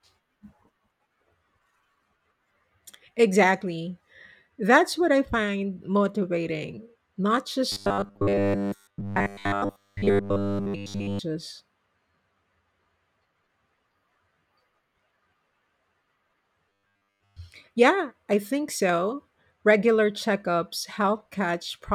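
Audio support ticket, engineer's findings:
Robotic sound from repeated short buffers, 7.72–11.19 s throughout and most of 16.69–17.38 s: rigid 100 Hz metallic buzz, likely about 10 ms buffers replayed under input starvation.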